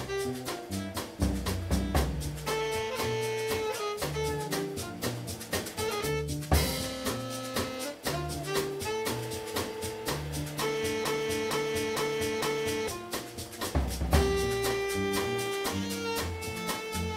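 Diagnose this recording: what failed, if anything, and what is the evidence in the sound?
A broken-record loop, most likely a stalled playback or stream buffer that kept re-sending the last fragment it held instead of fresh data. From 11.05 s to 12.88 s, one piece of the audio about 0.46 s long plays four times back to back, each repeat identical, giving a stuttering, stuck-needle rhythm. Whatever should have sounded during those 1.8 seconds is missing, and normal audio resumes at 12.88 s.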